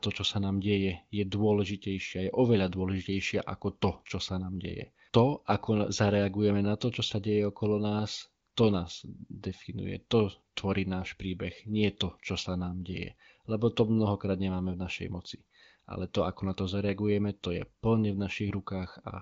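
No faults found: the speech comes through an AMR wideband (HD Voice) channel with nothing above 7.6 kHz, and any coding damage is faint at most, consistent with one of the codec's higher rates.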